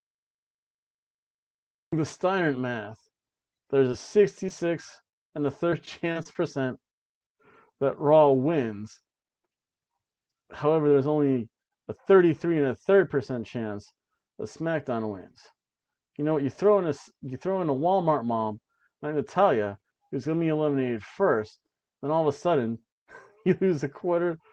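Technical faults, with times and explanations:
0 to 1.93 s, cut-off start: The recording begins late. Digital silence runs until 1.93 s, then the sound enters mid-event with no natural attack or fade-in. The abrupt jump from nothing to full level can produce a click.
3.91 s, 4.46 to 4.49 s and 4.49 to 4.51 s, short concealed packet loss: Brief pieces of about 10 to 20 ms never arrived in time. The receiver filled each hole by extending the preceding sound and then blended back into the real audio, leaving small smears or wobbles.
5.08 to 5.14 s, burst of packet loss: About 50 ms went missing in one block. The receiver continued the last sound and faded it as the gap went on, producing a short held buzz or hiss. The audio then picks up further along, with that stretch gone.
5.71 to 6.36 s, repeated packet loss (robotic sound): Five separate gaps fall within this span, the longest about 24 ms, and together they account for about 80 ms. 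Each gap is patched before the next arrives, so the sound turns choppy, with pieces missing. Concealment covers about 12 percent of the span, and the top end stops near 12 kHz, which fits a band-limited Opus call.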